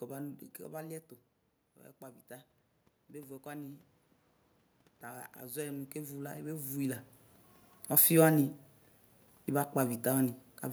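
At 2.0 s the input level falls by about 10 dB, and automatic gain rising follows as the gain control compensates, lifting its gain by about 5 dB over the next 1.9 s, to 3.91 s. A second rise of about 7 dB runs from 5.02 to 7.01 s. In both, the speech and the room noise swell together, which separates this from the level shifts near 0.5 s and 6.5 s that come from the talker moving.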